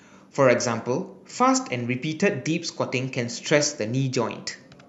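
Listening through the recording, nothing stood out as a technical fault.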